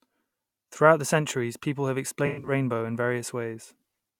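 In this speech clip, from 2.27 to 2.52 s, just after "the centuries people have", the sound turns smeared and phasey. This is AAC frame loss with concealment: about 171 ms of frames, which fits eight lost frames, scattered across 213 ms with a longest run of roughly a tenth of a second, were rebuilt from the last good spectrum.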